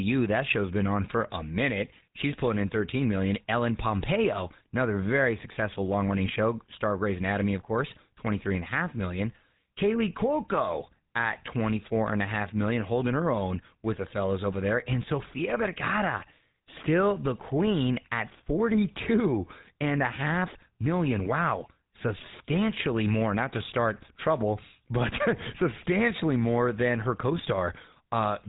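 From start to finish the speech has a buzzy, gravelly roughness and a dull, boxed-in top, with nothing above about 3.8 kHz. That is plainly audible GSM full-rate codec damage, which fits a 13 kbps phone path: the vocal tract is modelled and excited by coarse, regularly spaced pulses.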